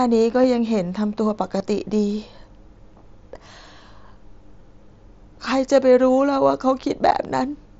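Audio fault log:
0.43, 1.59, 4.59 and 7.09 s: concealed Bluetooth headset packet loss. Headset voice packets went missing, 7.5 ms at 0.43 and 4.59 s and 15 ms at 1.59 and 7.09 s, which fits one or two lost frames. The receiver refilled each gap with repeated recent waveform, leaving the single losses nearly hidden.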